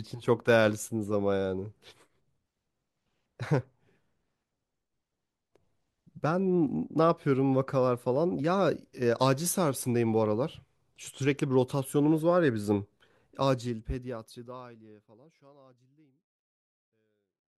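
Speech with no technical faults, and the smooth fade-out from around 13 s to the end is an ordinary editorial fade.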